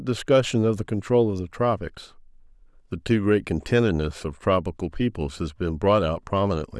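Nothing in the speech stood out as a technical fault on listening.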